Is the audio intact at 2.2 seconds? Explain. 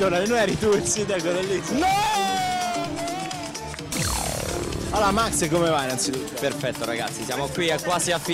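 Yes, at 2.2 seconds the audio plays through intact, with no dropout, click, distortion or other fault at that moment.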